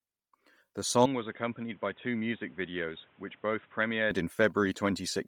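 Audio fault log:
Throughout: Bluetooth LC3 compression, likely the cause of the heavy coding damage heard across the whole speech clip. The upper spectrum is thinned out and refilled with noise, giving the voice a grainy, breathy edge. A spectrogram shows patchy, smeared high bands, which fits 10 ms frames at about 32 kbps.
1.06–4.11 s: input switched to a poorer device, likely the reason the speech turns dull and boxy with no gap at the change. Nothing remains above 3.8 kHz, level drops by about 10 dB, and a new noise floor appears roughly 30 dB down. A spectrogram shows a hard ceiling; the waveform shrinks.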